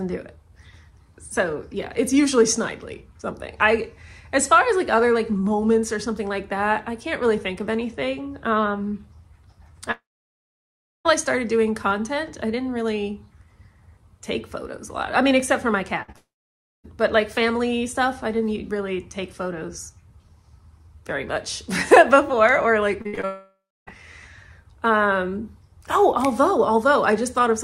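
At 9.91 s the stream likely stopped arriving, a long network dropout lasting to 11.07 s. About 1.14 s of audio never played. The receiver carried the last sound forward only briefly as a fading buzz or hiss, and roughly 1.03 s of that stretch is plain silence before the sound picks up further along, with the missing section simply skipped.

From 16.03 to 16.10 s a burst of packet loss removed about 60 ms of audio. The decoder extended the previous sound and turned it down across the hole, giving a short held buzz or fading hiss before playback jumps ahead.

At 16.12 to 16.16 s a further 20 ms went missing as short concealed packet loss. The decoder patched it by continuing the last sound and blending back in, so it passes as a brief smear or wobble.

The stream then likely dropped out again, a second long network dropout from 16.16 to 16.86 s. About 0.68 s is lost, mostly heard as roughly 0.58 s of silence after a quick fade.

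Between 23.02 and 23.25 s, repeated packet loss (robotic sound) left four separate gaps, the longest 63 ms. Each gap was patched from the sound just before it, and those patches fill more than half of this quarter-second. Because the patches land so close together, the result is choppy, with pieces missing.

Right after that, from 23.25 to 23.99 s, the audio likely cut out in a third long network dropout. About 0.62 s is missing. Here the fading continuation lasts longer, with only about 0.28 s of outright silence before the sound resumes further on.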